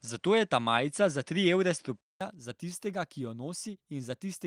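Input switched to a poorer device from the start to 2.21 s, likely a change of microphone or headset profile. The speech is dulled with nothing above 10.5 kHz, shifted a few decibels in level over faint noise, and a 200 ms silence precedes "za tistega ki jo".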